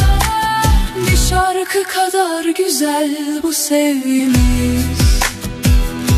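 At 4.18 s there's a quick blip from damaged data in the compressed stream. Part of the data got corrupted, so the decoder misread those frames, lost sync and had to hunt for the next valid frame header, and that glitch pops out as a short chirp, squawk, click or hole.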